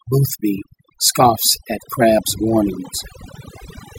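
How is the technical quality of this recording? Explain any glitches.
The quality suffers from overdone noise removal across the whole clip: the background drops and breaks up into twinkling specks. A noise reducer set too hard switches off frequency bands sitting near its noise estimate, taking softer speech detail along with them.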